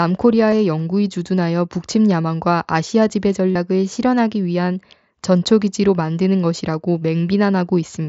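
Concealed Bluetooth headset packet loss: packets from the headset failed to arrive, and the phone filled the gaps by repeating recent waveform. At 0.51 s the patch is brief; from 3.52 to 3.55 s a longer run, consistent with several lost frames, buzzes before a slight warble.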